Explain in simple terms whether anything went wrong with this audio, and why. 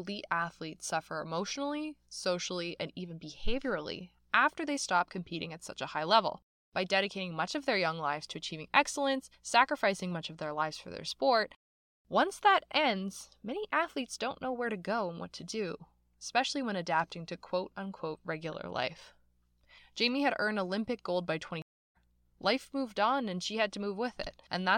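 Yes, something went wrong near the end. At about 21.62 s, just after "gold by", the stream's connection dropped and the player reconnected, a stream reconnect. That leaves about 0.33 s of silence, and the speech picks up roughly 0.4 s later than where it stopped, so a short piece is skipped.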